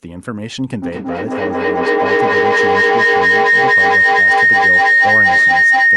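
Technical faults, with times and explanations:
0.82 s to the end: feedback howl. From here the speech is caught in a loop between a microphone and a loudspeaker sharing the room. Each trip around the loop adds level instead of losing it, so the returning sound grows rather than fading and narrows onto the band the loop favours. It settles into a howl near 2 kHz, with a loop delay of roughly a fifth of a second, and peaks about 14 dB above the speech.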